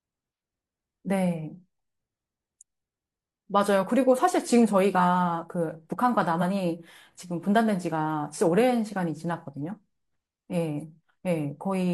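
At 6.38 to 6.42 s, lasting about 40 ms, a short glitch cuts across the audio. This is damaged data in a compressed stream. Some of the encoded bytes at that point were corrupted, so the decoder could not interpret those frames correctly. It lost its place in the stream and produced garbled output until it found the next valid frame header and resumed normal decoding.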